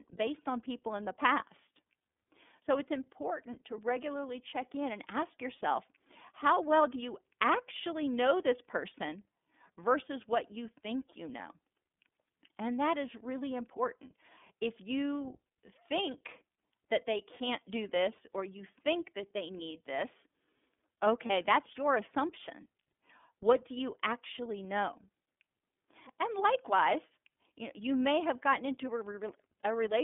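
The whole clip runs through the iLBC codec. The speech is squeezed into a 200 Hz to 3.5 kHz band and sounds plainly rough and synthetic, which fits iLBC's 13.33 kbps, 30 ms frame mode. From 21.26 to 21.31 s, just before "that's your assumption", there are lost iLBC frames: a brief buzzy, held-vowel smear where the decoder repeated the last pitch cycle. That fits a single dropped 30 ms frame, and it snaps back cleanly straight after.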